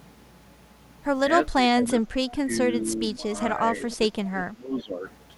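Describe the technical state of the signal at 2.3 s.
At 2.3 s the signal carries two overlapping faults. The first is speech suppressed in double talk, running from 1.54 to 2.51 s. With both ends likely talking at once, the echo canceller could not tell the local talker apart from the returning loudspeaker signal, so it turned everything down. The speech sags by as much as about 20 dB, adding up to roughly half a second of weakened or missing sound.

Inside that stretch, from 2.29 to 2.33 s, there is an echo leak. The loudspeaker side's canceller likely failed to strip out all of its loudspeaker pickup, so a residue was sent back. The result is a faint, delayed copy of the talker arriving 429 ms late and sitting about 25 dB below the main speech. It is heard as a brief scrap layered under the already dipping audio.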